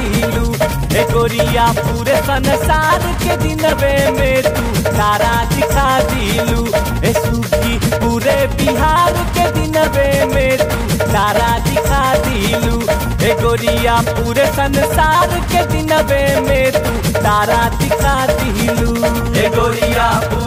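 No technical faults are audible anywhere in the recording.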